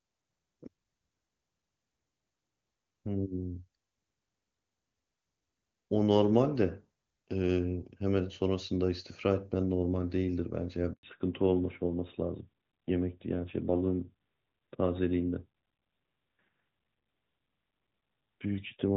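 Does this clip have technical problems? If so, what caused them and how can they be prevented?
Yes. At 10.93 s the speech cuts out and stays silent for 100 ms, until 11.03 s. This is a handover gap: while the call was passed between networks, no speech frames arrived, so the audio dropped out until the new link began. Prevention: make-before-break handover or better coverage at cell boundaries avoids the interruption.

From 11.03 s to the end the speech sounds duller and rougher, with nothing above 4 kHz, unlike the clear wideband sound before it. This is a fallback to narrowband: after the handover the call left HD Voice for an older narrowband codec, which fits a drop from AMR-WB to AMR-NB at its top rate. Prevention: keeping both networks HD Voice-capable with matching codec support lets the call stay wideband.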